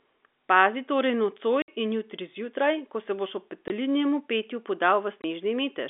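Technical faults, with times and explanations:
1.62–1.68 s, 3.68–3.70 s and 5.22–5.24 s, packet loss filled with silence: the sound cuts to dead silence for 60 ms, then 20 ms, then 20 ms, gaps that fit whole 20 ms packets (three, then one, then one) replaced by silence. The edges are abrupt. On a waveform each gap is a flat line with vertical walls. On a spectrogram it is a blank vertical stripe across the telephone band.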